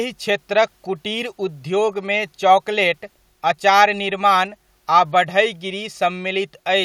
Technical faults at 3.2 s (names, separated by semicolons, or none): none